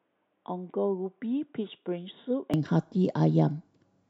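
From the start to 2.54 s the speech is dull and boxy, with nothing above 3.8 kHz, sits roughly 10 dB quieter, and carries its own faint background noise, far below the speech. At 2.54 s the sound opens up abruptly with no gap, pointing likely to an input switched to a poorer device. A plain low-pass filter or codec bandwidth cap would not change the level and noise floor together at the same instant.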